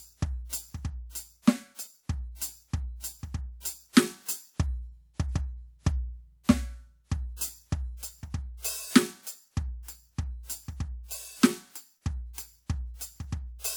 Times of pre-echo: 3.92-3.96

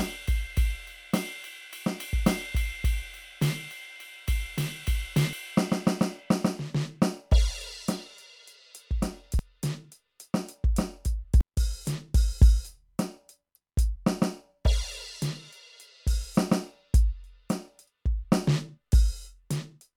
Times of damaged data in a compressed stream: 5.33, 9.39, 11.41, 13.55, 17.87

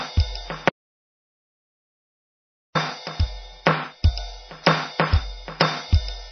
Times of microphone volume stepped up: none

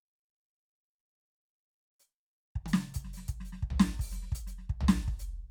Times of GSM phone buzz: none

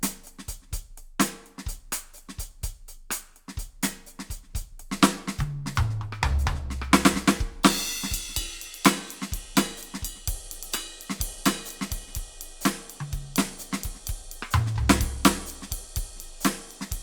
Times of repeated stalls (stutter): none

